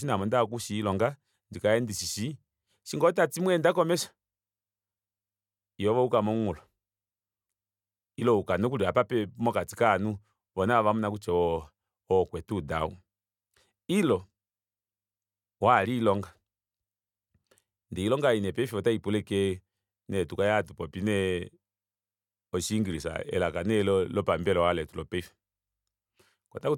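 No technical faults can be heard anywhere in the speech recording. Nothing in it calls for a timestamp or a closer look.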